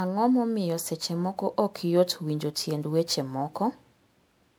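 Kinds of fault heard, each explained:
Generation loss: the speech sounds swirly, smeared and hollow, with blurred attacks, likely from about seven repeated MP3 encodes, each consistent with 128 kbit/s.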